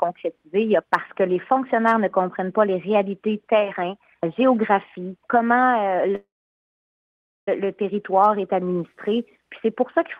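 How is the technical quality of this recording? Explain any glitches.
The recording has one clear glitch, a call audio freeze from 6.15 to 7.48 s. Packets were likely held up in transit, so the jitter buffer emptied and the receiver stretched the last sound into a brief fading buzz or hiss, then about 1.2 s of silence. When delivery resumed, the audio picked up where it stopped. Nothing is lost, but a 1.32 s gap is inserted and everything after it runs that much later.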